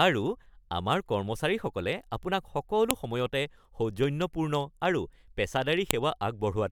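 A speech recording with sharp, loud clicks at 2.91 s and 5.91 s, about 3 s apart: file header played as audio, where joined WAV pieces kept their header bytes, which play back as samples.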